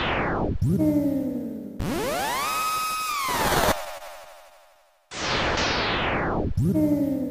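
From 3.75 to 4.79 s, packets arrived late or slower than playback, so the jitter buffer kept running empty: repeated stalls (stutter). The receiver extended the last sound through six waits, the longest 25 ms, 83 ms in all, so the audio drags and hiccups without losing anything.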